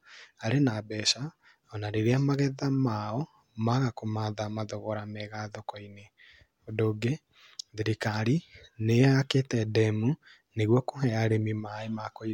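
No technical fault can be heard anywhere in the speech recording, with the signal holding steady and continuous throughout.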